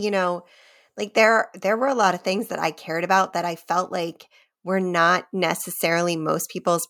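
No technical faults are audible anywhere in this speech.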